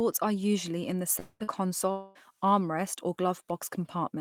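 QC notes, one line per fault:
1.19–1.43 s, long network dropout: just after "are usually in the", about 200 ms of audio is lost. The last sound is stretched into a fading buzz that ends in about 40 ms of silence. This likely reflects a network outage. On a spectrogram, smeared harmonics fade into a blank gap. The waveform decays to flat.
1.44–1.50 s, short concealed packet loss: about 40 ms goes missing. The decoder fills roughly 34 ms by continuing the last sound, then blends back, which produces a brief smear. On a spectrogram, the spectrum is briefly blurred and frozen. The waveform shows a short, overly regular stretch.
1.91–2.18 s, long network dropout: just before "armrest or", about 240 ms is lost. Concealment fills the whole gap with a continued, fading buzz and leaves no silence. The likely cause is an interruption in network delivery. On a spectrogram, flat, repeated harmonics thin out. 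The waveform tapers without a break.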